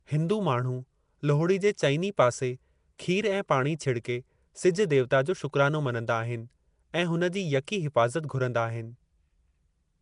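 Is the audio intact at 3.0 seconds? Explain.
No. At 2.98 s, just before "खीर ऐं पाणी", there is pre-echo: a short hiss leaks about 11 ms ahead of the sharp onset. The codec spread noise meant for the loud attack across its whole block, softening the attack. On a waveform this shows as a thin fuzz before the rising edge; on a spectrogram, a brief broadband smear leads the onset.

The sound around that moment also carries a rough, hissy, underwater quality, which likely comes from Nellymoser compression at a rate pointing to about 44 kbps. Weak bands are replaced with noise. A spectrogram shows patchy, speckled bands and nothing above 10.6 kHz.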